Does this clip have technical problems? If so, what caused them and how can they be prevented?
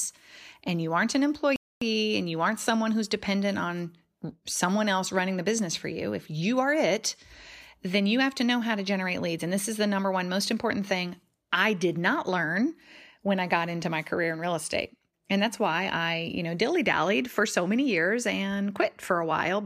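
Yes, there's a playback stall at 1.56 s. Right after "and you aren't an" the speech cuts to silence for 0.25 s, then resumes with "and you aren't someone". The player likely ran out of data or had its thread blocked, so output halted until it caught up. A larger playback buffer and an audio thread kept free of blocking work should prevent it.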